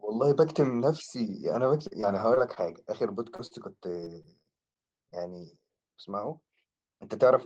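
From 1.87 to 2.58 s, repeated packet loss (robotic sound): four holes, none longer than about 36 ms, are each patched by extending the previous sound, leaving choppy speech with pieces missing. At 3.36–3.40 s and 3.46–3.53 s, short concealed packet loss appears as two isolated smears of roughly 20 and 40 ms. Each is a single blip, not a run. From 4.01 to 5.14 s the robotic pattern returns, with six quick gaps of up to 24 ms.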